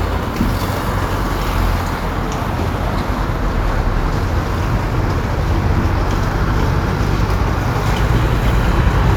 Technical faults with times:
none

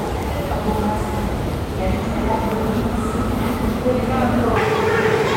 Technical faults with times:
4.56-5.36 section at the wrong speed

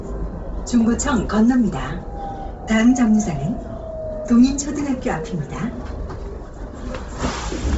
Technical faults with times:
0.00-7.78 Bluetooth LC3 compression

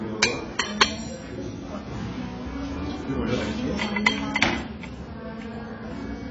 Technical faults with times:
0.00-6.30 AAC compression

